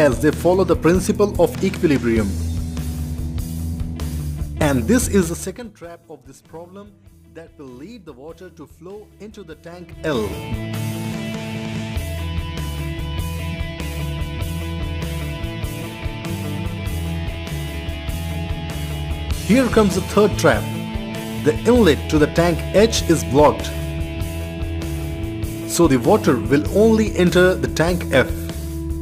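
From 5.18 to 5.74 s there is zipper noise. The level falls by roughly 20 dB here. The fall is not smooth. It moves in 3 dB steps, about fifteen a second. Nothing smooths the gap between one step and the next. Each jump leaves a small click. Together the clicks make a fast ticking that rides on the sound while the level drops.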